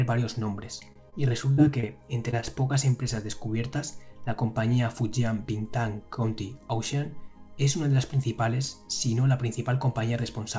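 Right at the start, from 0.80 to 0.85 s, there's a short concealed packet loss. About 20 ms of audio never arrived in time, so the receiver papered over it by carrying the last sound forward for roughly 12 ms and then crossfading back. It's a small smear, and the patch leaves the passage slightly longer than it should be, by a bit over a hundredth of a second.

Just after, at 0.93 to 0.97 s, comes a short stall from a late packet. The jitter buffer ran dry waiting for it, so the decoder held the last sound for about 29 ms, then picked up exactly where it left off once the packet showed up. Nothing is lost, but that moment hangs a touch too long with a faint buzzy dip, and everything after it lands about 29 ms later.

The losses keep coming at 1.09 to 1.14 s, 1.54 to 1.63 s, 1.80 to 1.85 s, 2.31 to 2.34 s and 2.40 to 2.44 s. Most drop about 20 ms, but the one at 1.54 s drops about 40 ms, with roughly 37 ms of invented fill. 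The others come through as brief smears or blurs.

The call path itself has a hard ceiling at 8 kHz, which fits G.722 at 64 kbps.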